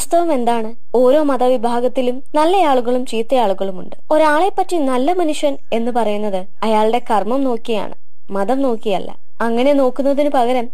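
From start to finish there's a DC offset, the whole waveform sitting about -19 dBFS off zero; you won't hear it, but it eats headroom and parks steady energy at the very bottom.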